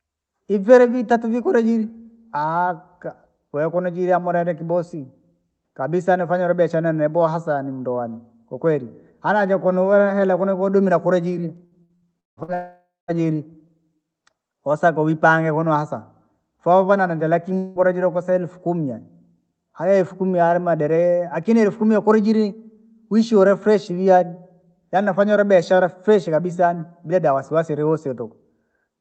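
Right after "hela kunu kudumila kulijiri", from 11.65 to 12.51 s, the speech passes through an Opus call path that tops out near 8 kHz and runs into repeated packet loss (robotic sound). Five separate gaps open up, the longest 172 ms, and the receiver fills each by stretching the last bit of audio it had. Nearly half of that span ends up as this patched sound. The speech turns choppy, with pieces missing.

A long network dropout most likely follows at 12.54 s and lasts until 13.11 s, with about 540 ms of audio never arriving. The receiver keeps the previous sound going as a fading buzz, which dies into roughly 190 ms of silence before the speech comes back with that section gone.

A shorter gap of the same kind, again likely a dropout, falls between "vouvana nenda lakini" and "kosa elfu kumi yaani" at 17.58 to 17.78 s. About 180 ms is lost, and the smeared fill covers the whole stretch with no silence.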